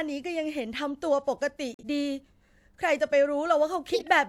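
A speech clip with two faults from damaged compressed frames. At 1.74 s the sound cuts out abruptly and stays silent until 1.85 s. This is a corrupt frame muted. The decoder rejected the damaged data, and the player filled the gap with silence. The 0.11 s hole fits two lost frames. At 3.93 s a loud burst of wrong-sounding energy appears and lasts until 4.08 s, peaking fairly high. This is a corrupt frame decoded. Flipped bits were played anyway, so energy landed at wrong frequencies. The length suggests about three frames.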